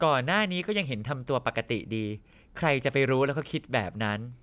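Speech recording with no technical faults detected anywhere in the audio.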